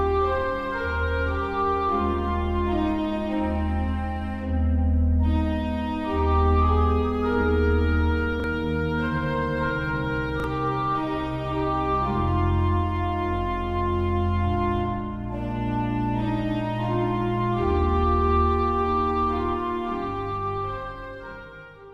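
A brief stutter at 8.40–8.44 s and again at 10.40–10.44 s, where a 40 ms piece plays twice with hard joins. This is a repeated buffer: late data made the device replay its last block, which fits a 40 ms buffer.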